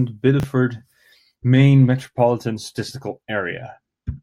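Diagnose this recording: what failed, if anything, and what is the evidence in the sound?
Buffer-stage chunks out of order: a 10 ms chunk plays three chunks late at 0.40–0.44 s, jumbling the speech at the hard joins.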